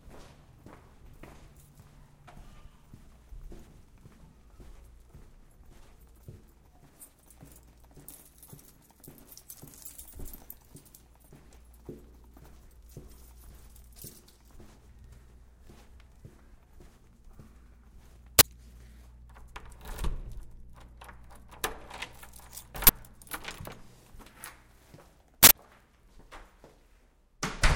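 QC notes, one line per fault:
18.39–18.41 s and 22.87–22.89 s, uninitialised buffer: blocks played before being filled sent leftover memory out as loud 21 ms cracks, which fits a 1024-sample buffer.
25.43–25.52 s, uninitialised buffer: a larger unfilled block played stale memory as samples, giving a longer 85 ms blast of loud digital noise, which fits a 4096-sample buffer.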